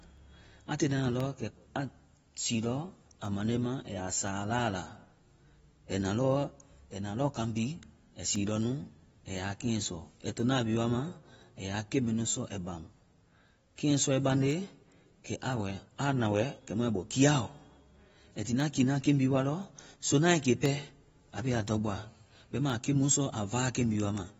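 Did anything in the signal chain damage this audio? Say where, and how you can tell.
Yes. Across the whole clip the speech is band-limited, with nothing above 7.6 kHz, and sibilants and vowels have a dull, smeared quality with a fizzy, warbling edge. This points to the codec stage, likely AAC-LC at a low bitrate, around 24 kbps. The giveaway is that the damage is continuous and spectral, a hard ceiling plus quantisation texture, rather than anything tied to particular moments.

Separately, at the driver or buffer stage, there are periodic USB or driver dropouts. Tiny gaps of silence, a small fraction of a millisecond each, recur exactly every 1.024 s from 0.17 s to 23.72 s, about twenty in all. Each one is heard as a regular tick, audible only while speech is present. The strict metronomic spacing separates this from random clicks or network packet loss, which would fall irregularly.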